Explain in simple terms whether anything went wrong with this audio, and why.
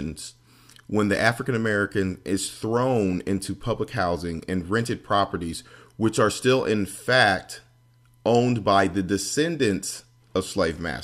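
Nothing went wrong here: there are no audible dropouts, glitches or distortion anywhere in the recording.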